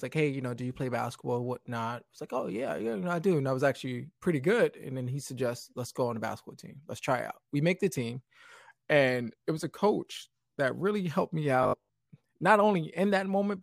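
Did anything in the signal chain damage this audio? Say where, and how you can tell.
Yes: robotic sound from repeated short buffers, 11.63 to 12.07 s. A 50 Hz buzz over the speech points to the driver buffer likely looping 20 ms blocks while skipping most new audio.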